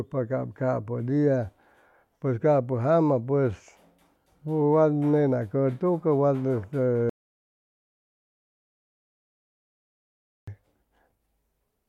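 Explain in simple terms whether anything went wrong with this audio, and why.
There's an audio dropout to silence from 7.10 to 10.48 s: the speech cuts out completely for about 3.4 s, likely a lost input or link, so that stretch is gone.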